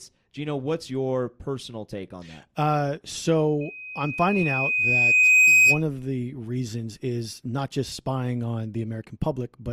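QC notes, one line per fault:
3.61 to 5.83 s, loudspeaker feedback squeal: a steady 2.5 kHz tone swells over roughly two seconds to sit around 10 dB above the speech, then stops just before "of the reasons is". The microphone hears its own loudspeaker, and that frequency keeps looping back and growing.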